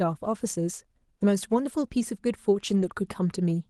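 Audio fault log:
2.69–2.87 s: lost packet rebuilt from error correction. About 100 ms was rebuilt from low-bitrate copies in the following packets, leaving no gap but rougher, noisier sound.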